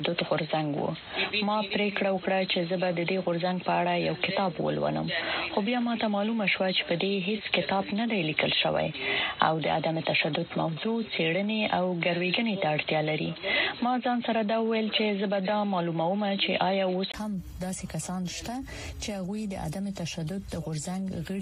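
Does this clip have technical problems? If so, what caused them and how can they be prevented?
Yes. From 0.0 to 17.14 s the sound is dull and boxy with nothing above 4.2 kHz, a different level and its own background noise. At 17.14 s a brief 20 ms gap comes before it opens up, most likely an input switched to a poorer device. Lock the input device in system settings so nothing can grab it mid-recording.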